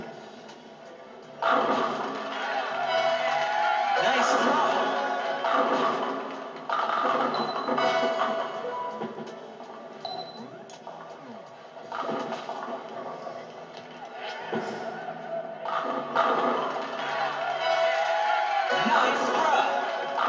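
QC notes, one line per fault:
No faults heard; call microphone processing sounds normal.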